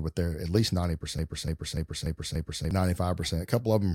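From 1.19 s to 2.71 s the speech falls into a broken-record loop. A 292 ms fragment repeats five times, back to back. A stalled player or stream is the likely cause.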